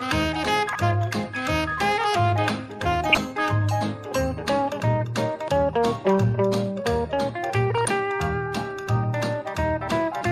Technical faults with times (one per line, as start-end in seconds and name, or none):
0.00-10.31 MP2 compression
0.66-0.75 DAB burbling
3.09-3.18 DAB burbling
7.74-7.88 DAB burbling